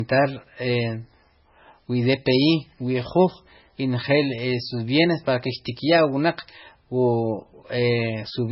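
From start to finish, nothing sounds above about 5.6 kHz, and the speech has a dull, smeared quality. This is likely low-bitrate audio saved at a high bitrate, so the earlier losses remain.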